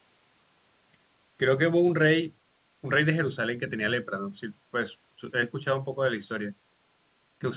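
No technical faults can be heard in the speech. It has come through a WebRTC call path, and nothing reaches above 4 kHz, which fits a narrowband telephone codec such as G.711 A-law at 64 kbps.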